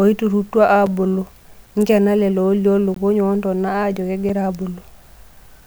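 A speech recording with two kinds of fault. Blocks of digital silence occur at 0.86 s, at 4.29 s just after "woontona ajo", and from 2.94 to 2.96 s, between "lelo olioo" and "woontona ajo". Most likely the output was not filled in time, so the sound cuts out with no fade and returns just as abruptly. The two 5 ms gaps sound like ticks, and the 20 ms one is a brief audible hole. Because the audio goes to silence, these differ from the spike, which adds something on top and removes nothing. At 1.81 s, just before "lelo olioo", an electrical switching spike is heard as a sharp snap or tight cluster of clicks over the speech. It lasts about 16 ms and was likely picked up from a nearby switch, motor or static discharge arcing into the audio line. Unlike the dropouts, the speech carries on underneath it.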